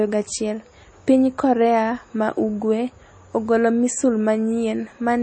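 MP3 compression damage runs throughout the speech, likely from a bitrate around 32 kbps: weak frequency lines drop out, and nothing is heard above 8.4 kHz.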